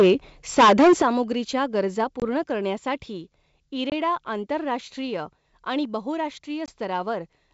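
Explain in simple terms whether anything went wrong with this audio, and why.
Microphone overload, at 0 to 0.13 s and again from 0.53 to 1.07 s. The speech gets a harsh, crackly edge on its loudest parts. The likely cause is a microphone input set too high. The loudest peaks tried to go past the most the converter can record, so their tops were sliced flat. In the second stretch that flattening is heavier, affecting roughly a third of the sound, so the distortion there is clearly worse.

Microphone volume stepped down, at 1.02 s. Right at the end of that distorted stretch, the speech and the background both drop in loudness at once, like someone turning a knob down a notch. This is most likely the call software noticing the overload and cutting the microphone's input level in a single step to stop the crackling.

Packet loss on an ADPCM call, at about 2.2 s, 3.9 s and 6.66 to 6.73 s. Each time there is a short, hard-edged gap of about 20 ms, which fits one lost packet filled with silence. 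This coding method predicts each bit of sound from the last. After a gap, the receiver's guesses no longer match the sender's, so the speech resumes slightly distorted before settling. The 3.9 s gap sits just before "आंतरराष्ट्रीय आणि". The wideband telephone coding itself leaves at most a faint trace.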